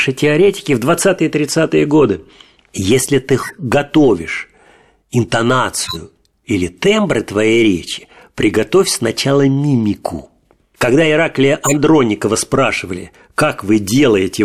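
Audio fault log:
3.42–3.61 s, 5.84–5.97 s, 11.64–11.74 s: corrupt frame decoded. Short squeaky noise bursts occur, each spanning what sounds like a few damaged compressed frames. Misread gains and codes put energy at the wrong frequencies. The bursts grow louder each time, the last being the loudest.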